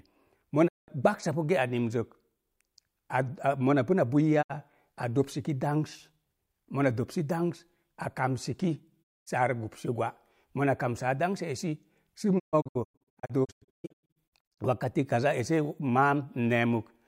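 The speech drops into brief, quickly faded silences at 0.67–0.90 s (before "ge'a nin"), 4.41–4.52 s (before "a dopsiki") and 9.02–9.28 s. From 12.38 to 14.60 s it breaks into scattered short holes, the longest 0.13 s. This is digital broadcast dropout: the receiver muted over corrupted or missing frames, and that audio is lost.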